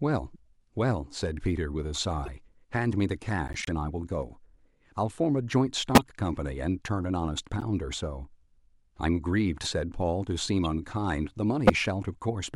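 Corrupt frame decoded at 0.34–0.36 s, 2.26–2.28 s, 3.48–3.69 s, 5.95–6.01 s, 7.59–7.63 s, 10.65 s and 11.67–11.70 s in this speech clip. Damaged compressed frames were played anyway, so misread codes and gains put energy at wrong frequencies for the length of each bad frame. Each is a brief chirp or noise burst. The first is faint, the 3.48 s event is longest, and those at 5.95 s and 11.67 s are loudest.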